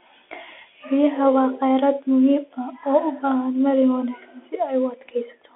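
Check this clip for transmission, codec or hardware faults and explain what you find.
There's one fault, and it runs the whole length of this speech clip: the Bluetooth CVSD headset codec. The band is squeezed to roughly 300 Hz to 3.4 kHz, so it sounds thin and phone-like. CVSD sends just one up-or-down bit per sample, which fits a 64 kbps link, with a step size that adapts. Fast, loud high content outruns that step, so the codec damage is plainly audible: scratchy sibilants and a grainy hiss under the speech.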